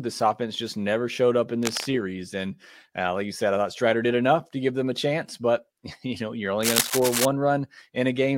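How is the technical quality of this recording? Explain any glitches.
The recording has two bursts of cable scratch noise in the speech. The likely cause is a worn cable, connector or control carrying DC being moved, so its contact resistance jumps rapidly and injects uneven noise. After "never showed up in", 1.63 to 1.86 s brings scratching roughly 10 dB under the speech. After "you know you're", a longer rustle from 6.63 to 7.26 s sits about level with the speech.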